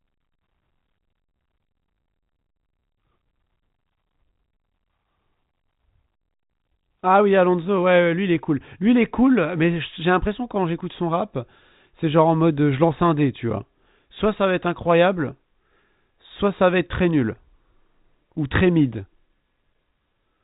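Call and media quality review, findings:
No faults found: the speech carries the narrow band of G.711 A-law telephone coding, with nothing above 4 kHz and only a faint quantisation noise that rides with the signal level.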